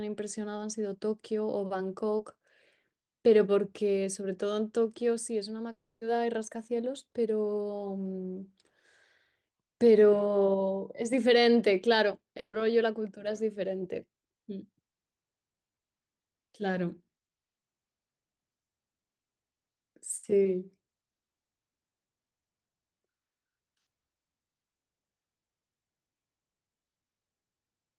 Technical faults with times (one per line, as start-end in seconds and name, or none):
2.17-2.21 short concealed packet loss
5.71-6.03 long network dropout
12.39-12.55 burst of packet loss
20.17-20.25 burst of packet loss